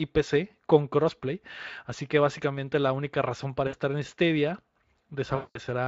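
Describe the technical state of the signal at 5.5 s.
Packets dropped from 5.35 to 5.6 s, about 200 ms of speech, and the codec's packet loss concealment extrapolated the last pitch and filter with falling gain, smearing the voice into a fading buzzy tone or coloured noise.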